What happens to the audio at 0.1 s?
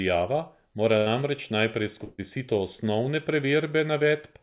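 Nothing goes wrong at 0.1 s: the speech passes through the call path intact, band-limited to nothing above 4 kHz as that narrowband codec always leaves it.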